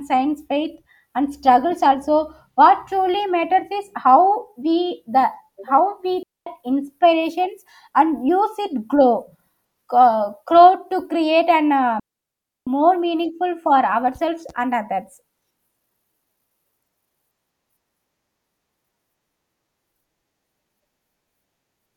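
The speech twice drops into a clean hole of near silence, with no click or noise burst at either edge: from 6.23 to 6.47 s, a gap of about 0.24 s ending just before "inspirations and", and from 12.00 to 12.67 s, a longer 0.67 s gap between "to create and uh" and "meaningful for". This is a digital wireless dropout. The radio link lost too much data, so the receiver muted the output with a very fast fade rather than pass corrupted audio.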